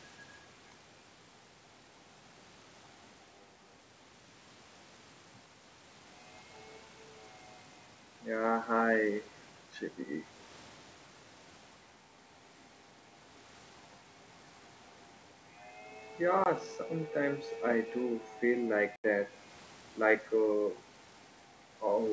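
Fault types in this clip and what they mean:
Packet loss on an ADPCM call: lost packets were replaced by silence and the decoder's predictor drifted, leaving hard-edged 20 and 80 ms gaps, then briefly slightly distorted sound.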